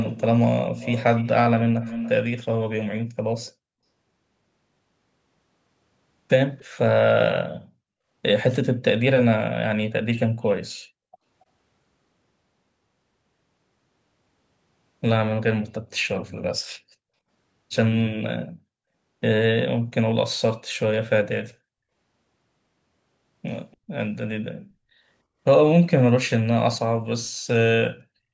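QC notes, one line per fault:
0.00–0.23, 0.76–1.30, 1.81–2.12, 3.46–3.52, 6.58–6.65, 8.52–8.56 and 23.71–23.77 s, echo leak: a delayed copy of the speech trails it by about 288 ms, fairly strong in the first two seconds and faint afterwards. This is likely a far-end loudspeaker whose echo canceller let some of the audio through. On a spectrogram it shows as a pale repeat of the speech's harmonic pattern, shifted right. On a waveform it appears as low-level ripples after some speech bursts.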